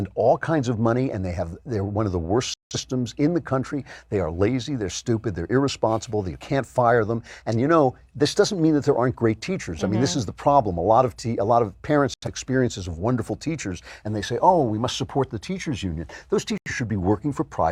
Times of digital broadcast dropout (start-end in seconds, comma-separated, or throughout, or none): 2.54-2.76, 12.14-12.28, 16.58-16.72